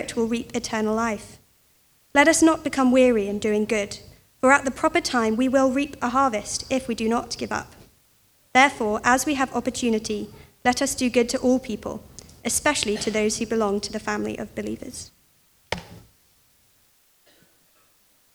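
No technical faults are audible anywhere in this audio.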